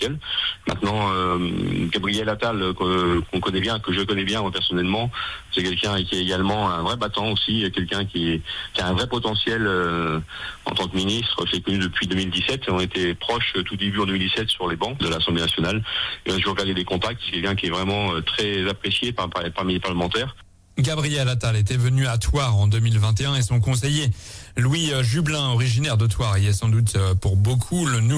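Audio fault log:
Nothing stood out on a careful listen to the whole recording.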